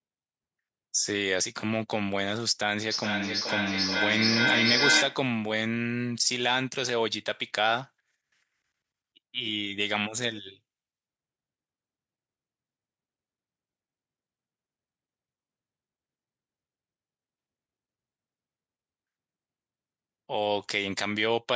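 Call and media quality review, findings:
Feedback echo between two devices, 2.91–5.32 s: speech returns at intervals of roughly 0.4 s, repeats peaking about 3 dB above the speech itself. Probable cause: a second device in the room replaying the far end into a microphone whose echo canceller cannot remove it.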